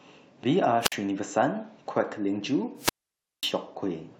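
At 0.80 s the speech breaks up in a wireless microphone squelch dropout lasting to 0.96 s. The radio signal from the analogue FM transmitter weakens, hiss rises briefly, and the receiver's squelch closes, cutting the output to near silence for 54 ms before the speech resumes. A longer dropout runs from 2.76 to 3.54 s. After the same rise of static, the squelch mutes the output for 538 ms, leaving a gap.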